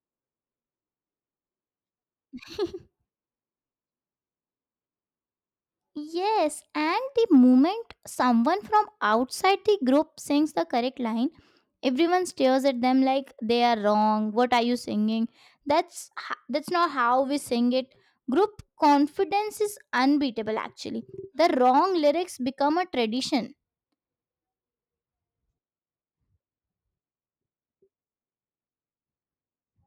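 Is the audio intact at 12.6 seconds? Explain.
No. Clock slip clicks run from 0.12 s to 29.86 s, so 12.6 s falls inside them. The likely cause is two unsynchronised clocks about 1000 ppm apart, which drops or repeats a single sample roughly every 20 ms. In the speech this becomes a soft, steady rattle.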